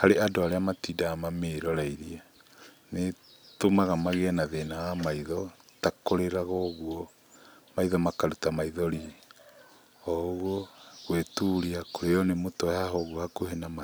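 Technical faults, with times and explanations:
0.35–13.75 s, clock drift buffer slips: a click lands every 1.67 s, about ten in all, each where a tiny chunk of samples gets dropped or repeated. Likely two devices on separate clocks, roughly 200 ppm apart, letting the buffer creep until it slips.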